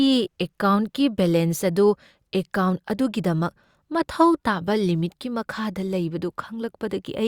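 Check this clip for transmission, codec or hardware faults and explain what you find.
Nothing faulty can be heard anywhere in the recording.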